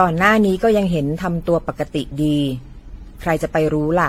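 From start to finish the speech sounds swirly, smeared and hollow, with blurred attacks and nothing above 16.6 kHz. This is likely generation loss: repeated lossy encoding, probably AAC at around 64 kbit/s about seven times, each pass adding fresh quantisation noise and spectral gaps.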